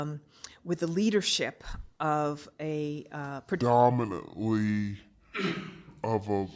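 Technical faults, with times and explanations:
3.61 to 6.55 s, wrong sample rate: from 3.61 s to the end the speech slows to about two thirds of its normal pace and drops about 7 semitones, which fits 24 kHz audio being played at 16 kHz with no conversion. Unlike a pitch shift or a time-stretch, tempo and pitch fall together by the same ratio, so the voice's resonances also sink and the speech sounds deep, thick and sluggish rather than merely lower or merely slower.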